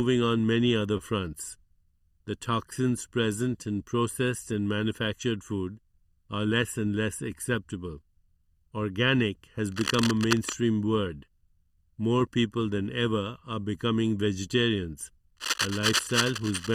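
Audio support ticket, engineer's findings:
Channel delay (comb filtering) throughout: hollow, phasey tone, first notch around 700 Hz. One channel lagging the other by under a millisecond, cancelling at evenly spaced frequencies when summed to mono.

Short stall from a late packet, 0.97–1.02 s: sound held about 21 ms too long, nothing lost. Jitter buffer ran dry and the receiver stretched the last bit until the packet showed up.

Cable scratch noise, 9.72–10.54 s and 15.36 s to the end: rough scratchy bursts about 5 dB under the signal. Likely a worn cable or connector being moved, with contact resistance jumping around.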